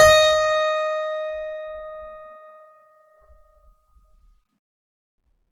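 From start to finish, the music carries Opus compression damage, and it is plainly audible. Tones sound grainy and rough rather than clean. Sustained parts take on a noisy, hissing texture. There is little of the swirling, hollow quality of MP3. The likely cause is the encoder's music mode running short of bits, so it keeps each band's energy but fills the missing detail with folded or noise-like content. The full bandwidth stays intact at a rate around 24 kbps.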